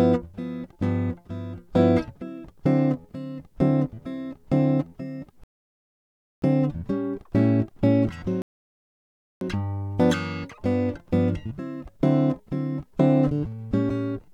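The player twice ran out of downloaded audio, causing a rebuffering stall from 5.44 to 6.42 s and from 8.42 to 9.41 s. Each time the music falls silent for about a second, then resumes exactly where it stopped, with nothing lost.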